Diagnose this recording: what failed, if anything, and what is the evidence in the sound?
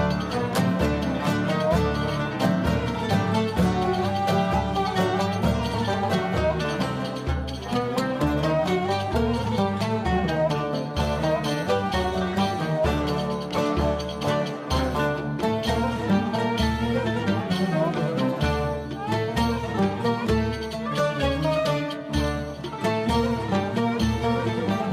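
Nothing failed; no faults detected.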